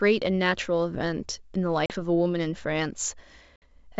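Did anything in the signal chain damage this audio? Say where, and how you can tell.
Yes, there's packet loss on an ADPCM call, at the network stage. Hard-edged gaps of 40 ms at 1.86 s and 60 ms at 3.56 s (a couple of packets, then about three) leave the G.722 decoder's predictor and step size out of sync, so the speech returns slightly off before settling.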